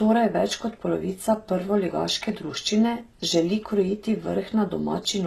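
Throughout the speech, two different kinds of coding damage are heard together. The swirly, synthetic-sounding highs of a very low-rate spectral-band-replication codec sit beneath a second layer of fine coding grain, and nothing is present above 18.7 kHz. That combination points to transcoding between lossy codecs, likely a low-bitrate HE-AAC pass followed by Opus at a moderate rate. A single codec would leave one consistent artefact signature, not two overlapping ones.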